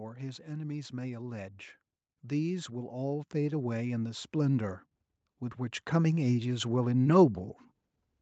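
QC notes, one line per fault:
2.22–4.83 s and 5.56–7.56 s, automatic gain rising: the level swells by about 7 dB, then about 5 dB, as the gain control decides the input is too quiet and slowly turns it up.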